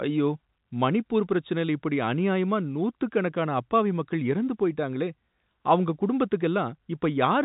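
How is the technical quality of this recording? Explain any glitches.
No glitches turn up anywhere in the speech, which has the familiar narrow sound of standard G.711 telephone coding, with nothing coming through above about 3.8 kHz.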